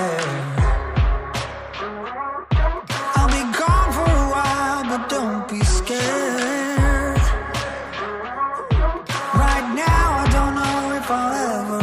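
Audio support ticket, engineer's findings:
No technical fault found on listening: the signal stays continuous and stable throughout, with no audible defect attributable to the capture, transmission or playback chain.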